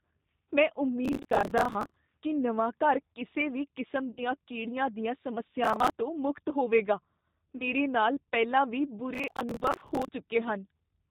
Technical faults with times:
0.00-11.11 G.729 codec
1.05-1.96 processor overload crackle
4.11-4.21 VoIP packet loss concealed by the speech codec
5.64-5.90 processor overload crackle
7.57-7.64 VoIP packet loss concealed by the speech codec
9.14-10.09 processor overload crackle

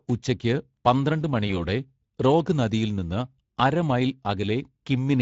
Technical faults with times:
0.00-5.21 Speex codec
1.47-1.64 VoIP packet loss concealed by the speech codec

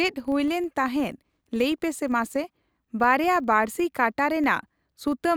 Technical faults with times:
0.00-5.36 filter restarted on every block

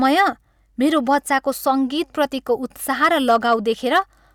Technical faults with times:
0.05-0.21 hard clipping
0.97-1.68 hard clipping
2.91-3.54 hard clipping
3.95-3.99 hard clipping

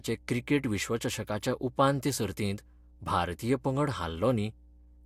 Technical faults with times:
0.00-5.05 mains hum

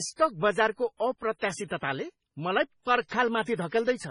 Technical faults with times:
0.00-4.10 MP3 compression
1.38-1.42 pre-echo
3.08-3.11 pre-echo
3.42-3.72 pre-echo

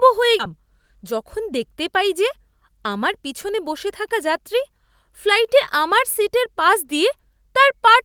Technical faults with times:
0.39 skip ahead
1.02-1.98 jitter buffer speed-up

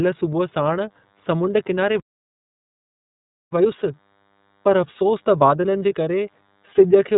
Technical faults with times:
0.00-7.18 DECT cordless phone buzz
0.00-7.18 iLBC codec
2.00-3.52 playback stall
3.52-6.52 time-compressed catch-up

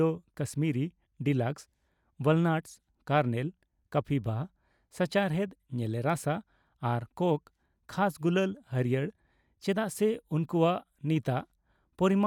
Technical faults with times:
none

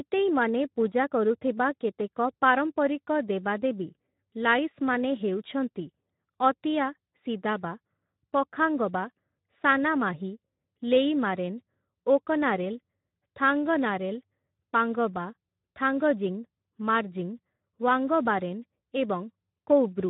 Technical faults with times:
0.00-20.10 Speex codec

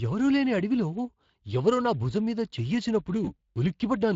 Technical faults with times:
0.00-4.15 Speex codec
3.25-3.31 VoIP packet loss concealed by the speech codec

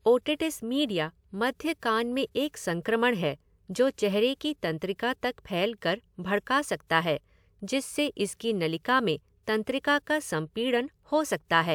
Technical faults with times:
none

